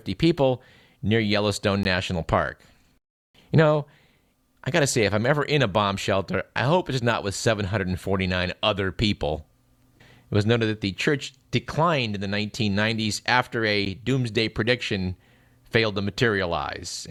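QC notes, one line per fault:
1.83 s and 13.85 s, gap between stream segments: short hard-edged silences of about 17 ms and 10 ms (the second just before "doomsday prediction failed to") where segment timestamps don't line up. They fall on 6 s segment boundaries.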